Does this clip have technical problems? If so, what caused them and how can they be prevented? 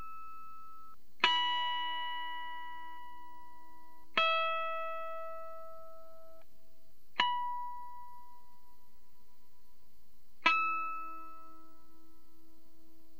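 No, there are no technical problems in this clip.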